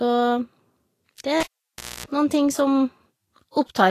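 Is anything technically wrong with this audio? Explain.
Yes, two faults.

Throughout, the speech sounds hissy and grainy, with smeared consonant attacks and nothing above 14.1 kHz. This is likely Vorbis compression at a low bitrate near 35 kbps: coarse quantisation turns treble detail into noise. Unlike a plain low-pass filter, it adds grain rather than just dulling.

From 1.40 to 2.06 s, a cable is pulled and plugged in. A pop cuts the sound to near silence for about 0.61 s, within which a 60 Hz mains buzz lasts about 0.26 s while only the plug tip touches, and a second pop brings the speech back. The buzz is what distinguishes it from a simple dropout.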